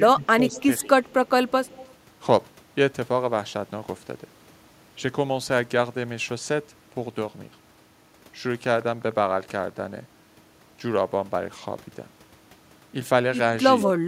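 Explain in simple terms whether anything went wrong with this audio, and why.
Right at the start, from 0.0 to 0.55 s and again briefly at 0.83 to 0.89 s, the voice dips. That's speech suppressed in double talk: the echo canceller likely got confused when both ends talked together and turned this voice down too.

From 0.52 to 0.82 s and 1.48 to 1.92 s there's a faint second copy of the voice trailing about 117 ms behind. That's an echo leak, likely a loudspeaker on one end whose echo canceller didn't scrub everything before sending it back.

Between 8.72 and 9.80 s there's a train of clicks, about ten of them, ticking evenly at roughly ten per second and as loud as the speech. Likely cause is interference or a faulty connection or power supply injecting repeated pulses.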